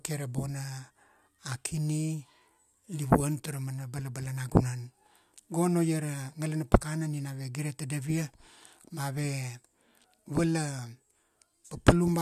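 Nothing stood out as a technical problem on listening to this speech recording.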